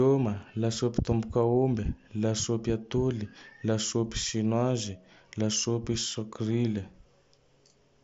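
No technical faults can be heard in this speech, carried over a Bluetooth mSBC headset link that passes nothing above 7.7 kHz.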